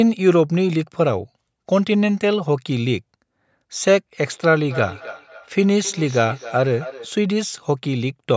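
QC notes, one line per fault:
4.68–7.15 s, feedback echo between two devices. A second device's playback re-enters this microphone. Repeats arrive roughly every 0.3 s, about 15 dB below the speech.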